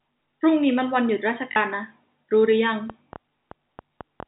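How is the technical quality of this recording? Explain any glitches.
The recording has two kinds of glitch worth knowing about. It's narrowband telephone-style speech, with nothing above 4 kHz, consistent with G.711 A-law coding at 64 kbps.

Packet loss with last packet repeated hits at 1.52 to 1.56 s and again at 3.04 s. The receiver covered 40 ms of missing audio, which fits two 20 ms packets, and later about 20 ms, one packet, by replaying the previous chunk. Those repeats seldom line up with the pitch cycle, so the first gives a short robotic stutter and the second a small blip.

The train of clicks runs from about 2.90 to 4.24 s. There are roughly seven sharp ticks, coming unevenly at about five per second, and some peak a little above the speech level. It's likely interference or a faulty connection pushing pulses into the signal.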